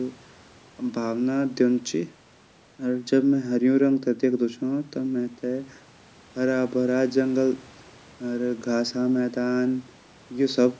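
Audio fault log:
The speech signal carries the ordinary marks of call microphone processing, with the lowest bass trimmed away and no content above 8 kHz, and no faults are present.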